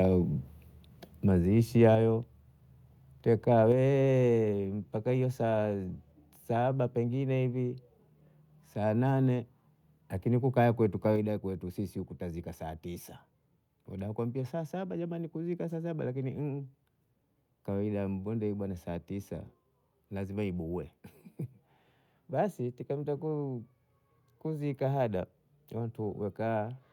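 At 1.95 s the speech and its background drop together, by about 5 dB. It is a microphone volume stepped down. The level falls in one step, not a fade. At 3.72 s it steps down again, by about 4 dB. At 11.16 s, between "lakini kukaya" and "sisi tazika saa tisa", it drops by about 3 dB more. Each cut is likely the call software lowering the input volume after judging the microphone too hot.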